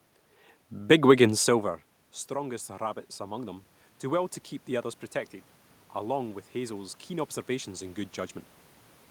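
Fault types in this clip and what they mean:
Automatic gain rising: gain control slowly adds about 4 dB after an input drop of about 14 dB; voice and room noise swell together at 2.32–4.97 s and 6.02–8.44 s.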